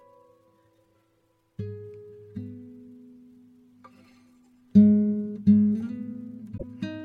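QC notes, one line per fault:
6.57–6.64 s, damaged data in a compressed stream: a glitch about 70 ms long cuts across the music near the end. Corrupted bytes in the encoded stream made the decoder misread those frames and lose sync until it found the next valid frame header.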